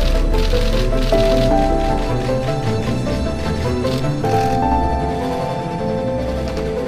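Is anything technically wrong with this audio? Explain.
Yes. From 4.22 s to the end, there is channel delay (doubling). One channel runs about 92.9 ms late, which fits a 4096-sample buffer. Summed to mono, the audio repeats as an equal-level slap echo.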